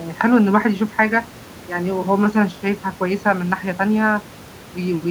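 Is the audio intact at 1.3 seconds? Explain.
Yes, the speech at 1.3 seconds plays through intact, with no audible dropout, glitch or distortion at that moment.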